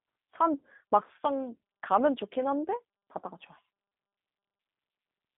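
The G.729 codec runs from start to finish, a low-rate VoIP coder that fits roughly 8 kbit/s and rebuilds the speech from a vocal tract filter, a pitch predictor and sparse pulses. Nothing survives above 3.8 kHz, the line band spans about 200 Hz to 3.6 kHz, and plainly audible coding damage leaves the speech rough and synthetic.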